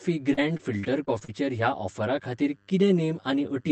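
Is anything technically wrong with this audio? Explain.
Yes, there are two faults.

Channel delay (comb filtering) runs through the whole clip. One channel trails the other by roughly 10 ms, and when they are folded to mono, the shared sound cancels at evenly spaced frequencies starting near 50 Hz. The speech sounds hollow and phasey. Unlike a dull codec or a muffled microphone, the colouring is a fixed series of notches across the spectrum rather than a simple loss of treble, and it does not come and go.

Repeated packet loss (robotic sound) affects the stretch from 0.33 to 1.30 s. Several short holes follow one another, the longest about 40 ms. Each hole is patched by stretching the sound just before it, and roughly a sixth of the stretch is filled this way. The speech turns choppy, with pieces missing. A single dropout would leave one gap, but here the breaks recur in quick succession, which produces the robotic texture.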